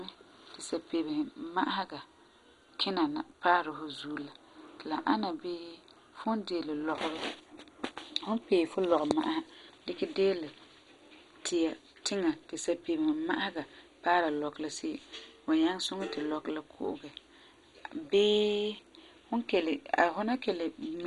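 Speech throughout, with the dull, gurgling, granular sound of heavy MP2 compression, likely from a low-rate encode that fits about 56 kbps. Nothing reaches above 11.2 kHz, and upper sub-bands flicker on and off. That flicker sets it apart from a plain low-pass filter or MP3's watery swirl.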